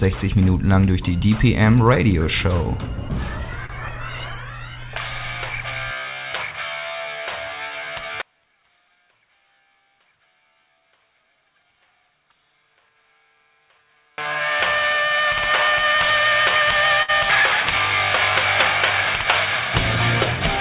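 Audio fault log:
3.66–3.81 s and 17.03–17.10 s, short stall from a late packet: the jitter buffer ran dry and the last sound was stretched, about 32 ms then 58 ms, before resuming where it stopped. Nothing is lost. A spectrogram shows briefly frozen, horizontally smeared bands, and the waveform a repeated-cycle stretch.
8.22–14.18 s, one channel inverted: the level collapses by about 36 dB to a faint residue, likely because one channel's polarity is reversed so the shared content cancels in the mono sum. A waveform shows a sudden amplitude drop, and a spectrogram a darkened band below the 4 kHz ceiling.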